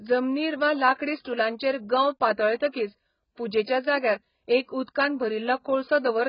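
Throughout the speech, the audio has likely been squeezed through AAC compression at a very low bitrate, around 12 kbps on AAC-LC to judge by the damage, which is heavy. With so few bits per frame, the encoder drops everything above 5.1 kHz and coarsely quantises what remains, thinning bands into gaps or substitute noise. The speech sounds dull and smeared, with a warbling, fizzy texture on sustained sounds and sibilants.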